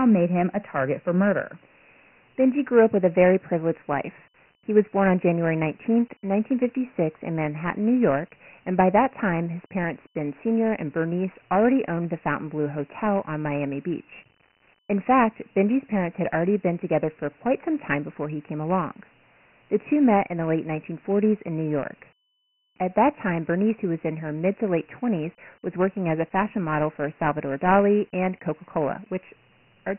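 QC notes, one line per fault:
Throughout, Dialogic VOX ADPCM: the speech has nothing above 3 kHz and thin lows below about 150 Hz. A heavy, gritty hiss clings to it because each sample is coarsely coded as a 4-bit step, which fits a 6,000-per-second VOX rate.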